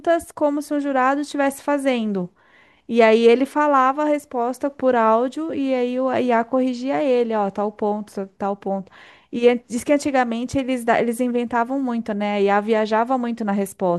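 A speech recording with nothing technically wrong anywhere in it, so there's no fault to point to.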